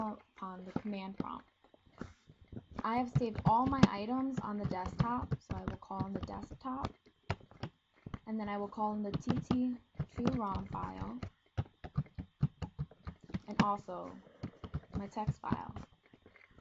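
Nothing here trips the ear as a fault; the sound just runs along with no dropouts, glitches or odd jumps to point at.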